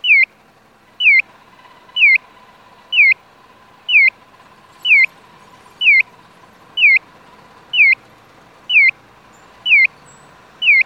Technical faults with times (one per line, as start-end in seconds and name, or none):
none